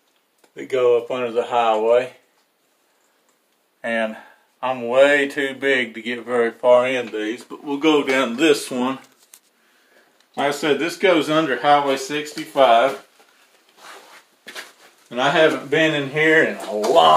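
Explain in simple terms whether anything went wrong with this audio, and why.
Nothing went wrong here that a listener would notice; the sound stays steady all the way, with no dropouts, glitches or odd noises to point to.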